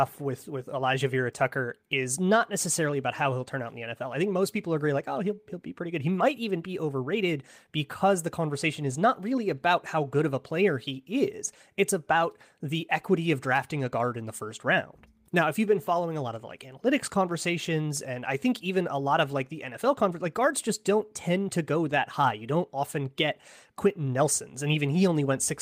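No technical faults can be heard anywhere in the recording.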